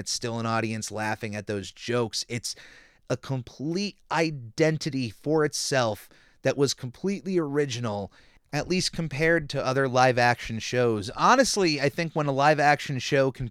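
No technical faults are audible.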